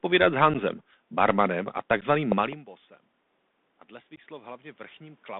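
The whole thing sits on a Bluetooth CVSD headset codec, so nothing above 3.6 kHz gets through, s sounds are scratchy, and there's a grainy hiss under the speech. At 0.54 s, right before "barmanem a", there's unconcealed Bluetooth headset packet loss: about 11 ms drops out to silence with abrupt edges. The same thing happens at 2.01 s, just after "barmanem a". Between 2.32 and 2.55 s you get two loud pops, about 15 dB over the speech, most likely a connector or static glitch. Around 2.5 s the talker also moves and the input drops a lot, and from 3.89 to 5.3 s the automatic gain rises by about 5 dB, so voice and background slowly swell together. Inside that swell, at 4.16 s, there's another unconcealed packet-loss hole of about 15 ms.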